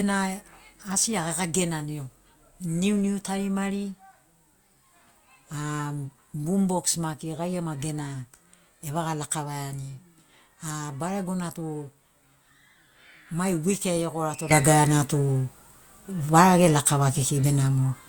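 After "mai wik ai egorato" at 14.51 s, a sudden gain jump instantly lifts speech and noise together by about 12 dB with no ramp, likely from an unsmoothed gain change.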